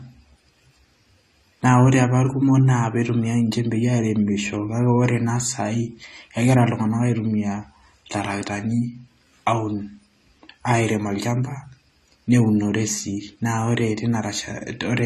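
From start to finish, the speech has likely been through AAC compression, an AAC-LC encoder running short of bits, with damage that fits a low rate near 32 kbps. Starved of data, the coder drops everything above 14 kHz and quantises the remaining bands coarsely. The result is plainly audible: a dull, smeared top end, with a warbling, fizzy texture on sibilants and sustained vowels where bands thin out or turn to substitute noise.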